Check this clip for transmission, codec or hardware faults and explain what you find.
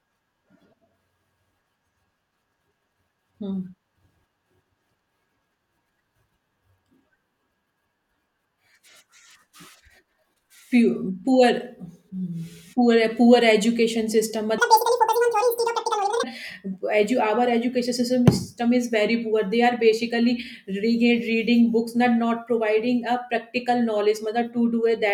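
One fault. From 14.58 to 16.23 s the audio was read two samples at a time (double speed): the speech runs twice as fast and an octave higher. Unlike a pitch shift, timing doubles too, because paired samples form single frames.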